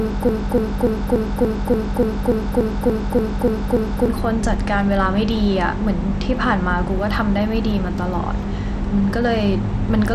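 A speech clip that opens mid-stutter: from the very start until 4.08 s, the same 0.29 s fragment repeats back to back, thirteen times in all, with the loop already under way when the audio begins. This is a broken-record loop. The stream most likely stalled and kept resending the last piece it held, so whatever should have played in those four seconds is lost. Throughout the clip, the sound also carries a plainly audible gritty, coarse texture, and nothing reaches above 16.8 kHz. The treble sounds thin and unstable rather than cleanly extended. This is likely Bluetooth SBC compression at a low setting; the damage fits a bitrate of around 96 kbps. With so few bits shared across its wide sub-bands, the codec starves the upper bands and quantises the rest coarsely, leaving grain and aliasing riding on the speech.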